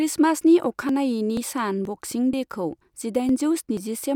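Audio missing between chunks occurs at 0.41, 0.89, 1.37, 1.85, 2.33, 2.81, 3.29 and 3.77 s. Every half second the speech skips forward by about 20 ms and joins without a pause, likely from losing a sliver while one 0.5 s chunk closed and the next opened.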